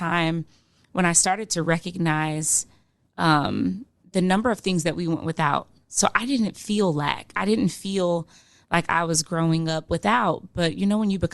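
No technical faults can be heard anywhere in this speech.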